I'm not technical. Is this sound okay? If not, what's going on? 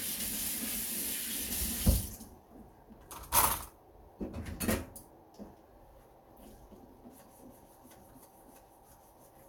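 Yes, nothing stood out as a problem when listening to this recording of everyday sounds.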